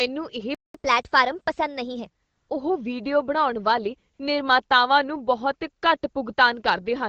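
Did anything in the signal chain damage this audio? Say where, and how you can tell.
Yes. At the playback stage, the player most likely ran short of buffered data or had its thread held up, so output stopped from 0.55 to 0.75 s. That is a playback stall: the speech cuts to silence mid-flow for about 198 ms and then resumes.

Also at playback, from 0.75 to 2.07 s the player works off that backlog by resampling at 1.15 times normal speed. This catch-up at higher speed makes the speech sound hurried and lifts its pitch by roughly two semitones until it settles back to normal.

In call processing, the sending phone judged the talker silent and stopped sending speech frames, and the receiver filled the gaps with AMR comfort noise, from 2.23 to 2.49 s (260 ms) and from 4.13 to 4.19 s (60 ms). In those gaps the real background gives way to a smooth, steady synthetic hiss that switches in and out. 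The AMR wideband coding, which fits a 12.65 kbit/s HD Voice call, adds only light damage of its own.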